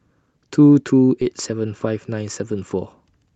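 A speech clip in which, at 1.21 to 1.23 s, the talker abruptly jumps forward with no silence in between, as if a piece of the sentence vanished. This is a skip ahead: roughly 0.7 s of audio was dropped in transit or discarded by an overflowing jitter buffer, and playback spliced the surrounding audio almost directly together.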